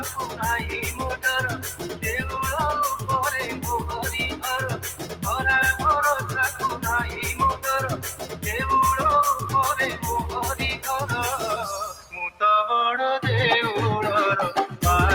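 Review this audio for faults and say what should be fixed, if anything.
Throughout the clip the level pumps and thins, with held parts and tails sagging by around 10 dB while attacks mostly come through. A noise suppressor tuned for speech was left on and is treating steady, non-speech content as background noise to turn down.

Several stretches are pulled down further than their surroundings: 0.0–0.41 s (about 8 dB), 1.57–2.04 s (about 10 dB), 4.75–5.24 s (about 9 dB), 7.95–8.45 s (about 10 dB) and 11.92–12.13 s (about 10 dB). This is sound cut by the noise suppressor, which mistook these sounds for noise.

To fix it, disable the speech noise suppressor for this kind of material, or switch it to a music mode, before capture.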